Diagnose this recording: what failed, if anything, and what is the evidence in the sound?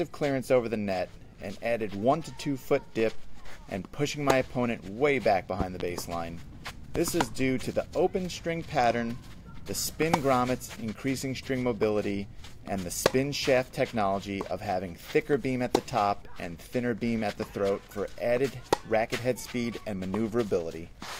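Three sharp loud pops, a close double between 5.60 and 5.83 s and a single one at 6.96 to 6.99 s, stand roughly 15 dB above the sound, which continues underneath. The likely cause is a voltage spike in the analogue wiring, from a plug, switch or static discharge.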